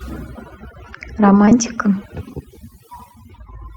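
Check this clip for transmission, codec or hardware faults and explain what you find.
Two faults are audible in this speech clip.

Overdone noise removal runs throughout. The suppressor pulls individual frequency bands down whenever they sit near its noise estimate, taking quiet speech detail with them. The background drops and breaks up into twinkling specks, unlike low-bitrate codec swirl, which also warbles the louder sounds.

Short concealed packet loss occurs twice in a row, from 1.45 to 1.49 s and from 1.49 to 1.53 s. Each time, audio failed to arrive and the receiver extended the preceding sound before blending back. It heard as a brief smear or wobble, not a hard dropout to silence.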